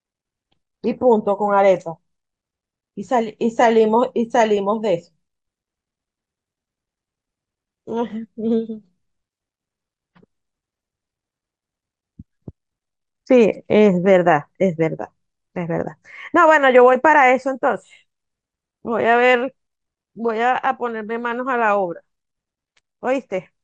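MP2 compression runs through the whole speech recording: it sounds dull, with a gurgling, granular roughness. This is likely Layer II coding starved of bits, consistent with roughly 80 kbps, so upper sub-bands drop out and flicker while the remaining ones are coarsely quantised.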